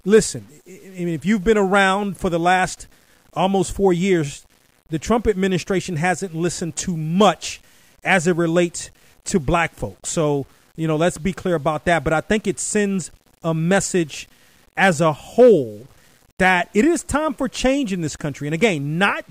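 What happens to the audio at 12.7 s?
At 12.7 s the speech carries a grainy distortion that tracks the sound. It runs through the whole clip. The likely cause is low bit depth without dither: rounding to about 8 bits. The error sits roughly 40 dB below the signal, so quiet stretches turn gritty.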